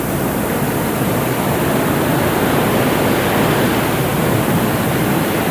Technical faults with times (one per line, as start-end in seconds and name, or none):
0.00-5.51 low bit depth with noise shaping